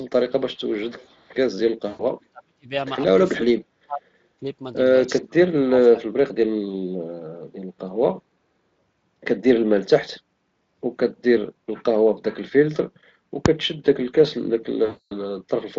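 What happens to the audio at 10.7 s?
At 10.7 s the speech plays through intact, with nothing going wrong at that moment beyond the light character of the Speex coding it passes through.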